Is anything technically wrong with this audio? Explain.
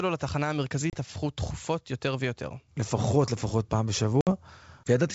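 Yes. At 0.90 to 0.97 s and 4.21 to 4.28 s, the speech cuts to an abrupt silent hole, then returns with brief distortion. This is packet loss on an ADPCM call: 30 ms and then 60 ms went missing, throwing the decoder's predictor and step size out of step with the sender's until they resettled.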